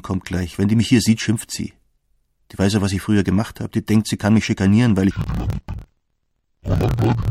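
Interleaved audio read as planar from 5.11 s to the end: each 26.12 ms block's alternating samples split into halves, dropping pitch an octave with a choppy 38.3 Hz flutter.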